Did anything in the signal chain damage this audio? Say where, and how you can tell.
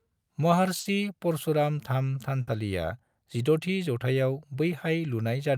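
Yes. At 0.79 to 0.88 s and again at 2.41 to 2.50 s the speech briefly smears into a held, fading sound, then picks up abruptly a little further along, as if a sliver were cut out. That is a burst of packet loss on the network. Consecutive packets never arrived in time, so the receiver stretched the last audio it had for about 60 ms while lowering its level. Playback then resumed past the gap, losing roughly 60 ms of speech each time.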